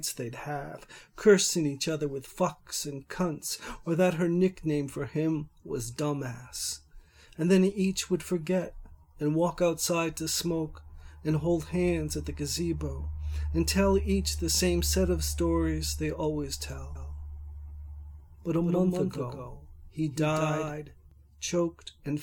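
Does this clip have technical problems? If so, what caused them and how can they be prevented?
Yes. From 16.95 to 21.11 s there is a doubled audio track: a full-band copy trails roughly 200 ms behind, about 5 dB quieter. Unlike an echo, it has no decay or room colour and starts and stops abruptly. It is likely a second capture through a slower path. Prevent it by routing the source through only one input or monitoring path.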